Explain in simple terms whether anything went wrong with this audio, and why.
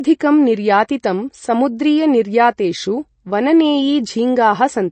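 The speech is dulled and plainly watery throughout, with nothing heard above about 8.3 kHz, so s sounds lose their crispness. This points to MP3 compression, likely at a low quality setting, where the encoder drops treble and faint detail to save space.

At about 1.03 s, a brief hiss of around 12 ms leads into a sharp attack, softening its edge. This is pre-echo: the codec spreads its noise across a whole block, so the noise meant for the loud moment also fills the quiet just before it.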